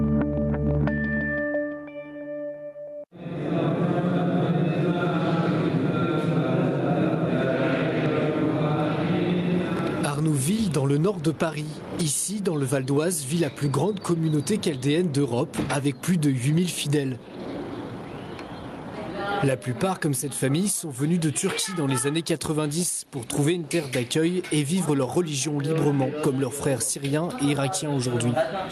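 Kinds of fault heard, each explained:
gain pumping: The level seems to breathe, swinging by around 20 dB between gaps and peaks. Loud and quiet passages sit unnaturally close together and the whole sound feels squashed. The likely cause is input gain set far too high for the microphone, with a fast limiter or compressor clamping down hard on every loud moment.
chunks out of order: From 9.77 to 9.79 s there is a brief garbled, jumbled instant. A 10 ms piece of audio plays one chunk late, after the piece that should have followed it, so nothing is missing but the sequence is scrambled. Swapping the pieces leaves three hard joins where the waveform jumps abruptly.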